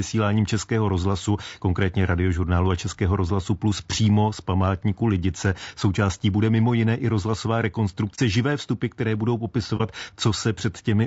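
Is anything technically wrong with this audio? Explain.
Yes. Throughout the speech there is plainly audible low-delay AAC compression, likely AAC-ELD at a low rate near 32 kbps. Coarse quantization at the low bitrate leaves noise between the harmonics, so the voice sounds rough and grainy; a spectrogram shows noise filling between harmonics.

AAC frame loss with muting occurs at 8.15–8.19 s and 9.77–9.81 s. Each is a 30 ms gap, consistent with one zeroed frame, faded by overlapping windows. It sounds like a soft dropout and appears as a tapered notch in the waveform and a blank vertical strip on the spectrogram.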